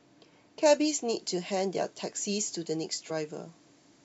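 From 0.66 s to the end, the speech has pre-emphasis left on: a treble boost following the 50 µs FM curve was never undone by the matching de-emphasis, leaving the top about 11 dB hotter at 10 kHz than at 1 kHz. The result sounds thin, bright and sharply sibilant.

At 3.09 s, compressed frames are skipped: about one frame, roughly 20 ms of audio, is missing, consistent with a 23.2 ms frame. The audio jumps forward at that point.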